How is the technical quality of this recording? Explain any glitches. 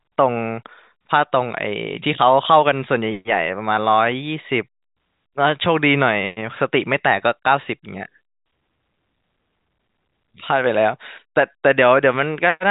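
No glitches are audible.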